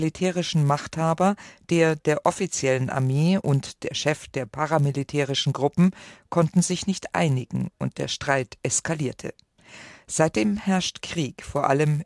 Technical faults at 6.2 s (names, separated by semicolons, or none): resampler restarted on every block